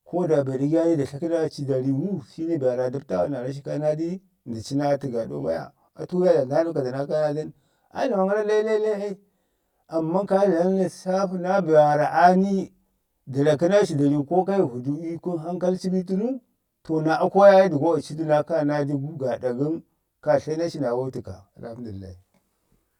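Throughout the speech, the sound is rough and slightly doubled, with a colouring that never changes. This is channel delay (comb filtering): one channel arrives roughly 20 ms behind the other, and when the two are summed to mono, the shared content cancels at evenly spaced frequencies. The first notch sits at roughly 20 Hz, with many closely packed notches above it carving a fixed comb into the spectrum.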